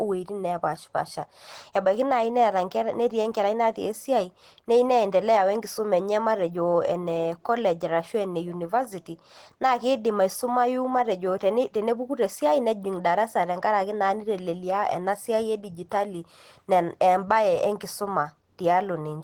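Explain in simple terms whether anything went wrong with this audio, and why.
Opus compression runs throughout the clip, making the speech sound hoarse, grainy and somewhat muffled. The likely cause is an Opus encoder starved of data and switched into its speech mode, which rebuilds much of the sound from rough outlines and noise instead of the real detail.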